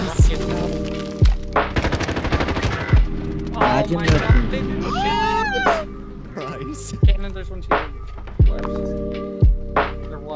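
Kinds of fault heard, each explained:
No technical faults are audible.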